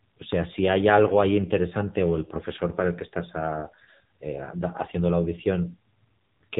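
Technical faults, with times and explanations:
Throughout, AMR narrowband mobile codec: the speech sounds buzzy, thin and synthetic, with nothing above 3.8 kHz, because AMR-NB rebuilds the voice from a vocal-tract model driven by sparse pulses. Damage this heavy fits a low mode near 6.7 kbps.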